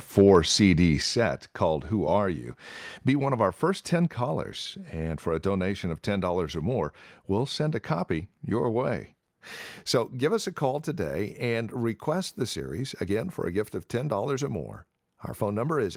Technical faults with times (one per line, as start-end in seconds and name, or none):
1.02 microphone volume stepped down